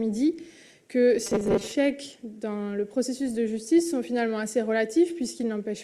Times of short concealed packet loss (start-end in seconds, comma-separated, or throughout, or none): none